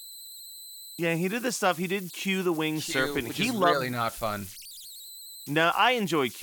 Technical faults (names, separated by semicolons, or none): converter idle tones